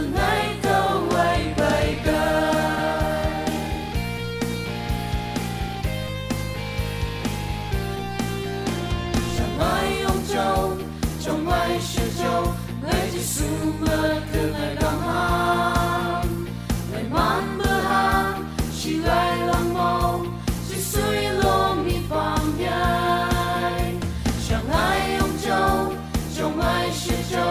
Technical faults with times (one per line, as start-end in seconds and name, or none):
none